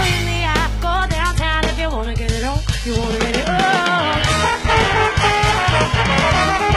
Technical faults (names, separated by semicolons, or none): adaptive stream at a lower bitrate